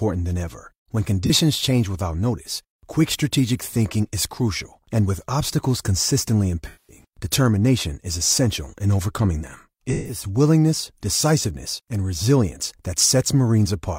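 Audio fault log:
1.25–1.31 s, 6.67–7.05 s, 9.92–10.23 s: AAC frame loss with concealment. The decoder lost frames and rebuilt them from the last good spectrum, producing one brief smeared patch, then two longer noisy, phasey stretches.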